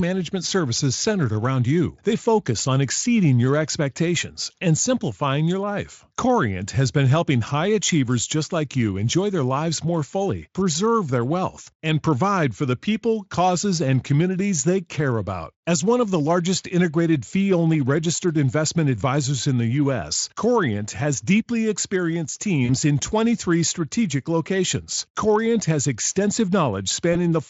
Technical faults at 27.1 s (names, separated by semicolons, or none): VoIP packet loss concealed by the speech codec